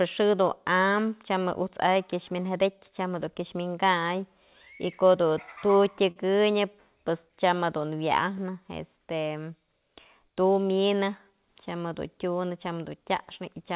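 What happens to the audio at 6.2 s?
A short stall from a late packet sits at 6.11 to 6.18 s: a packet arrived late, the jitter buffer ran dry, and the receiver stretched the last sound by about 47 ms before resuming where it left off. Nothing is lost, but that sound is held slightly too long.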